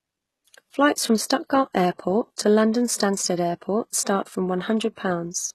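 HE-AAC compression runs through the whole speech clip, and is likely the cause of its plainly audible coding damage. The codec keeps only the lower spectrum and synthesises the treble by copying lower bands upward under a coarse envelope, so sibilants come out gritty and lisping, with harmonics that fail to line up across the crossover. Nothing sounds above 12.3 kHz, and the degree of damage fits a low bitrate around 16 kbps.

Pre-echo appears at 2.36 s, as a short hiss smeared about 14 ms ahead of a sharp onset. It appears again at 4.96 s, just after "start from", where the hiss spreads about 19 ms ahead. In each case the attack landed late in a transform block, and the quantisation noise scaled for the loud part spread across the quiet moment before it, leaving the onset soft.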